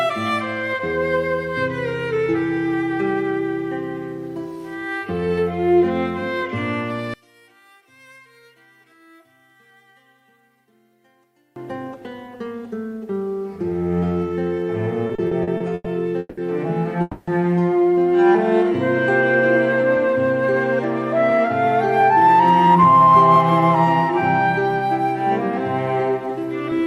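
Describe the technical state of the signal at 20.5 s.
At 20.5 s a jitter buffer speed-up is underway, spanning 19.97 to 20.56 s. To drain a backlog, the receiver cut short pitch-period pieces, roughly 40 ms in total, so the sound runs at 105% speed and feels hurried with pitch unchanged. Spectrogram harmonics stay level while events compress in time.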